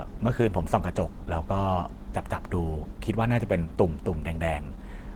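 From start to finish the speech carries plainly audible coding damage: it sounds muffled and hoarse, with a rough, grainy texture where cleaner tone would be expected. This is likely Opus compression in its hybrid mode, which blends the speech coder in the low band with band-filled high content. The degree of roughness fits a low rate around 16 kbps, though the bandwidth stays full, with content reaching about 20.2 kHz.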